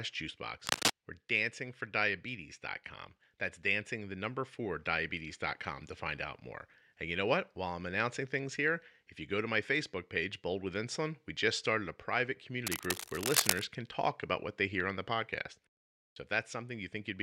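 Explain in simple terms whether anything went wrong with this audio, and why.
Twice in this speech clip, a burst of scratchy, rustling noise sits on top of the sound. This is cable scratch noise. The first burst runs from 0.66 to 0.90 s and is louder than the speech. The second runs from 12.67 to 13.68 s, after "just started a private" and before "can talk about what", at about the speech's own loudness. The likely cause is a worn cable or connector being moved, making its electrical contact flicker.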